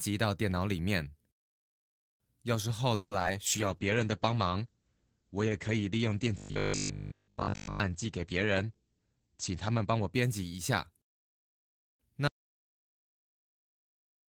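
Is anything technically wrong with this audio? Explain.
Yes, this speech clip has several call-transmission faults, one after another.

From 2.95 to 3.13 s there is a call audio freeze. The last sound is stretched into a fading buzz for about 160 ms, likely because delayed packets left the jitter buffer empty. The speech then resumes where it stopped, with nothing lost but a 160 ms delay added. A spectrogram shows smeared, decaying partials with no new detail.

Short concealed packet loss follows at 3.19 to 3.33 s and at 3.22 to 3.25 s. Each time, about 20 ms of audio failed to reach the decoder and roughly 10 ms of continued sound filled the hole. It is heard as a brief smear or wobble. The waveform shows a small splice, and the spectrogram shows a momentary blur.

A call bitrate drop runs from 3.48 to 12.05 s. The encoder went from 32 kbps to 10 kbps and stayed at the lowest rate for about 5.1 s. 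The bandwidth shrank from 20 kHz to 8 kHz, so the speech turns muffled and watery. The spectrogram shows everything above 8 kHz cut off flat, with coarser detail below.

From 6.38 to 7.80 s there is robotic sound from repeated short buffers. The speech becomes a rigid, metallic buzz at 50 Hz. That fits a roughly 20 ms buffer being replayed almost continuously while the real audio is skipped, likely because new audio arrived too seldom. The spectrogram shows evenly spaced 50 Hz harmonic lines, and the waveform shows identical repeating blocks.

A jitter buffer speed-up runs from 8.56 to 10.06 s. The speech plays at 109% speed with unchanged pitch, and sounds hurried. The receiver trimmed excess buffered audio by cutting short pitch-period pieces, about 150 ms in total. The waveform looks compressed in time, with tiny seams where pieces were removed.

At 12.28 s an audio dropout to silence begins and lasts to the end of the clip. 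The sound cuts off mid-flow to silence with no room tone, likely from a lost input. The waveform is a flat line, and the spectrogram is completely blank.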